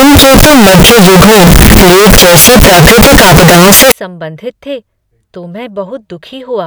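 From 0.00 to 3.92 s the speech is buried in very loud, harsh distortion. Quiet stretches blare as loudly as the rest. Then it clears. This is the sound of signed and unsigned mixed up. The likely cause is 16-bit samples read with the wrong sign convention, flipping the top bit. Every zero crossing then becomes a jump across the full range. Near-silence turns into maximum-level noise.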